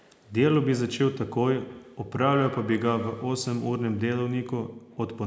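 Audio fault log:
1.7 to 3.34 s, feedback echo between two devices: the speech comes back as a faint repeat about every 150 ms, peaking around 16 dB below the direct sound. A second device in the same room plays this call's audio aloud, this microphone picks that playback up, and the echo canceller here ignores it because it only removes sound from its own loudspeaker, so the speech goes round the loop again and returns thinner and more ringing.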